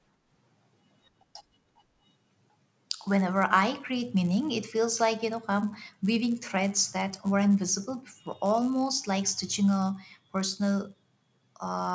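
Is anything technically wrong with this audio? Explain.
Yes. Throughout the speech, the resampler restarted on every block: each 10 ms block was converted from 48 kHz to 16 kHz without its neighbours, leaving edge errors heard as a 100 Hz buzz under the speech.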